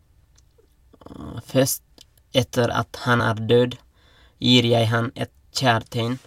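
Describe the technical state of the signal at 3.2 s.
Compressed frames skipped: about one frame was lost or rejected by the decoder at 3.19 to 3.21 s, so the speech jumps ahead roughly 20 ms.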